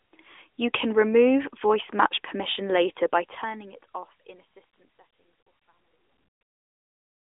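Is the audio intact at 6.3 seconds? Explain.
Yes, the audio is intact at 6.3 s; the only change there is the level easing down as part of the smooth fade-out.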